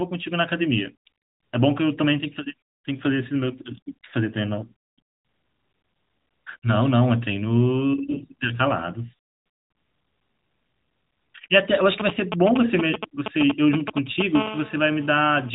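AMR bit errors strike from 8.06 to 8.24 s, a span that fits roughly eight 20 ms frames. A few percent of the less protected bits arrive flipped while the frame checksum still passes, so the decoder misplaces its excitation pulses and misreads fine gain and spectral values. The speech holds its pitch and level but turns briefly hoarse and gargly.

GSM signalling bursts run from 12.0 to 14.37 s: a nearby 2G phone sending short groups of radio bursts, repeating at 217 Hz, which the audio circuit rectifies. They come through as a galloping dit-dit-dit of brief raspy buzzes, roughly as loud as the speech itself.

GSM phone buzz takes over from 14.37 to 15.50 s as the phone settles into a call and transmits continuously at 217 bursts per second. The rectified pulses form a steady, hard buzz at 217 Hz, rich in harmonics and unrelated to the speech, sitting about 10 dB below it.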